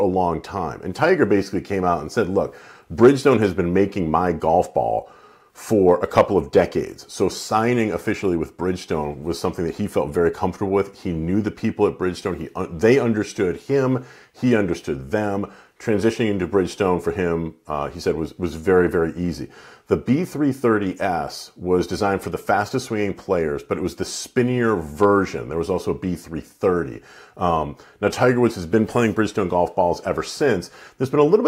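Hard clipping occurs at 3.03–3.08 s and 5.89–6.21 s, overdriven by about 3 dB, and at 25.02–25.04 s by about 2 dB. Peaks exceed what a stage can pass and are cut flat, adding high harmonics heard as brief crackle.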